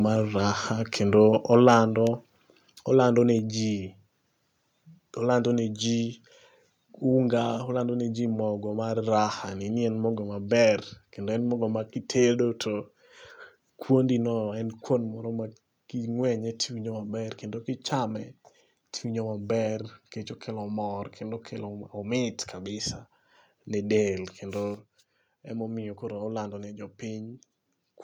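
Microphone overload appears between 1.53 and 1.77 s, where the loudest peaks of the speech are flattened at the converter's ceiling, pushing past it by about 3 dB. Only a small fraction of samples are cut, but their squared-off tops add a harsh, crackling edge to those syllables. The likely cause is an input level set too high at the microphone stage, so the strongest moments had no headroom left.

A sudden gain jump occurs at 24.74 s, when the level drops by about 5 dB in a single step and stays there until the clip ends at 28.04 s. Speech and background noise fall together, with no fade between the two levels. This points to a digital gain change applied instantly rather than ramped, likely a setting change or bit shift taking effect mid-stream, and the abrupt step is audible as a distinct drop.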